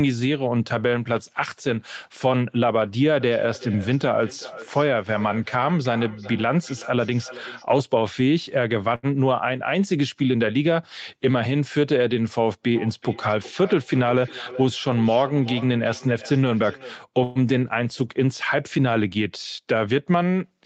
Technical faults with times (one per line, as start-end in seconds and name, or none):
3.20-7.67 feedback echo between two devices
8.95-9.06 short stall from a late packet
12.74-16.99 feedback echo between two devices
13.33-14.98 jitter buffer speed-up
17.23-17.38 call audio freeze
19.59-20.04 jitter buffer speed-up